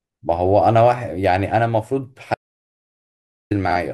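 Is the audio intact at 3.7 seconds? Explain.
No. Between 3.66 and 3.75 seconds the speech has frames out of order. Two neighbouring blocks, each about 46.4 ms long, play in swapped order, so the later half of this short stretch comes first. Each block is consistent with two coded frames. You hear a garbled flutter. No time is lost. The passage stays its normal length.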